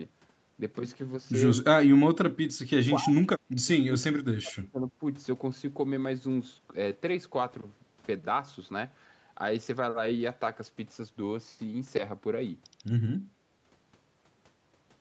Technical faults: speech suppressed in double talk

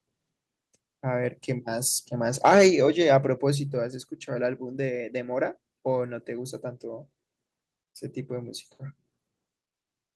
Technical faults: microphone overload; microphone volume stepped down

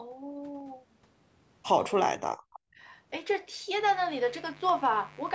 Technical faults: speech suppressed in double talk; mains buzz; dropped samples

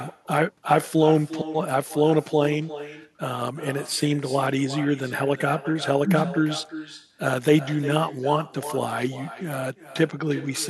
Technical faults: echo with no canceller

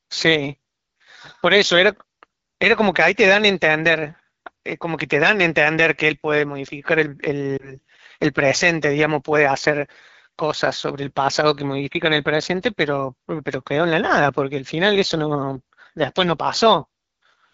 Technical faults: AMR wideband (HD Voice) codec; lost AMR speech frames

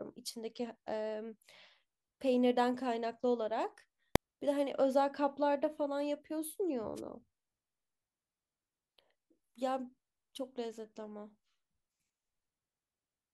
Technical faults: invalid numbers at full scale; wireless microphone noise hit

